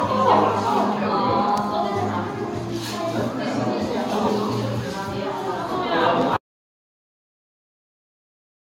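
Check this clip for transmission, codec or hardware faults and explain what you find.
Two faults are audible: generation loss across the whole clip, and a dropout to silence that runs from 6.37 s to the end.

Generation loss, throughout: the audio has likely been decoded and re-encoded around ten times with AAC. Each pass quantises again on a shifted frame grid, so errors stack. The sound is swirly, hollow and smeared, with blurred attacks and nothing above 17 kHz, which fits a 96 kbit/s AAC chain.

Audio dropout to silence, 6.37 s to the end: the sound cuts off and is replaced by silence with no room tone. The likely cause is a lost input, such as a disconnect, failed link or mute, while the recorder kept writing silence.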